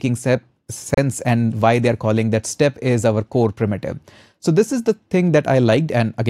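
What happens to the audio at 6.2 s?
Nothing goes wrong at 6.2 s; the audio there plays through intact, with no dropout, click or other fault.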